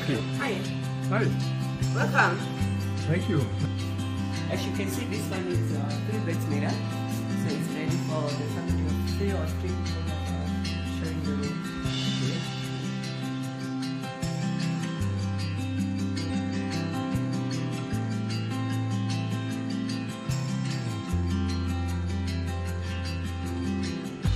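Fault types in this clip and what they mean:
Damaged data in a compressed stream: three short glitches cut through the sound, at 0.38 to 0.44 s, 4.14 to 4.19 s and 16.26 to 16.30 s, each lasting roughly 45 to 60 ms. Corrupted bytes in the encoded stream make the decoder misread or refuse those frames and lose its place. For the moment it takes to find the next valid frame header, the sound breaks up.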